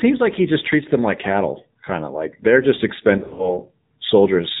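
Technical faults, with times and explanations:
Throughout: AMR narrowband mobile codec. Nothing above 4 kHz and a buzzy, synthetic texture, which fits a low AMR-NB mode near 7.4 kbps, unlike a simple low-pass filter's clean muffling.
3.18 to 3.60 s: lost AMR speech frames, just after "of like they're just". About 140 ms of speech is missing in gaps of at most 40 ms, scattered over 200 ms. The decoder reuses the last good pitch and vocal tract settings, so the gaps sound like brief warbling dips rather than hard silent dropouts.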